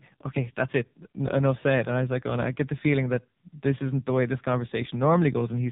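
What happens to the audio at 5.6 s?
AMR narrowband mobile codec damage runs through 5.6 s. The pitch-and-pulse model, at what sounds like about 5.9 kbps, leaves the speech buzzy and synthetic, with nothing above 3.8 kHz.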